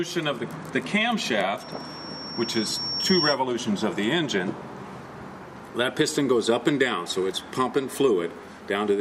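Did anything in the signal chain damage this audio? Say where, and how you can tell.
Yes. A loudspeaker feedback squeal enters at the acoustic stage between playback and capture: the microphone picked up the loudspeaker it was feeding, and at one frequency the loop gain rose above one, so that component kept re-amplifying itself. From 1.60 s to 3.39 s a single tone near 5.5 kHz swells over roughly a second and a half until it sits about 5 dB above the program, then stops.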